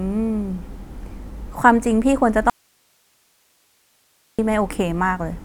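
At 2.50 s the speech cuts off abruptly, and for about 1.89 s, until 4.39 s, only a faint hiss remains, sitting roughly 40 dB below the normal level before the speech snaps back mid-flow. This is an audio dropout to a faint residue. The wanted signal was likely lost upstream while the path after the break stayed live, so the gap carries that path's own hiss instead of true silence. It does not sound like a natural pause or a fade.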